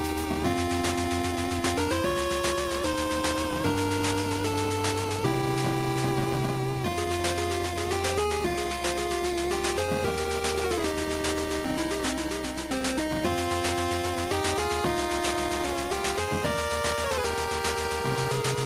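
Nothing stood out as a technical problem on listening to this recording.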